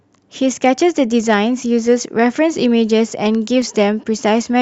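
At 1.63 s and again at 3.62 s the speech skips slightly, a case of overlap between stream segments. The timestamps of neighbouring 2-second segments overlapped, so the player trimmed what it took for duplicate audio, discarding about 6 ms and then about 15 ms of real signal. Each is heard as a tiny skip. On the waveform the trace jumps abruptly with no smooth join, and a spectrogram shows a thin vertical broadband line at each point.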